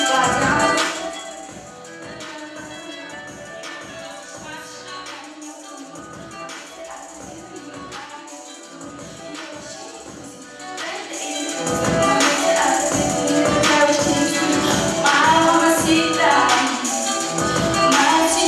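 From 0.69 to 1.37 s, the level drops by roughly 15 dB, and a fine ticking rides on the sound as it falls. This is zipper noise. The gain moves in discrete jumps, around a hundred a second, with no smoothing between them. Each jump leaves a tiny click, and together they form a buzzing zip. The same fault returns from 10.52 to 11.82 s, as the level climbs back up by about 15 dB.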